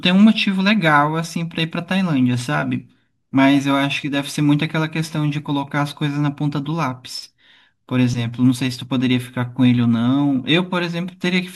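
Speech with a block size mismatch (truncated) throughout: the end of each block is discarded, leaving a 46.9 Hz buzz, which fits 1024-sample blocks. Speed is unchanged. A spectrogram shows thin vertical lines every 21 ms, and the waveform shows abrupt jumps at each block edge.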